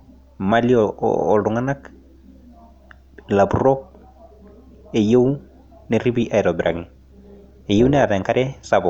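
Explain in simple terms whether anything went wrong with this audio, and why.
Something does go wrong near the end: from 6.62 to 8.09 s the speech picks up a fast, buzzy flutter, a bit robotic. That's overlap-add ripple. The audio was chopped into short overlapping slices and stitched back unevenly, so the loudness pulses around 200 times a second.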